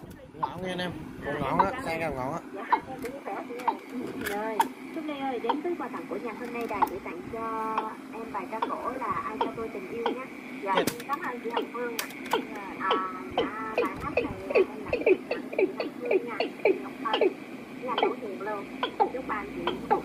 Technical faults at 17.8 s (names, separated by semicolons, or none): none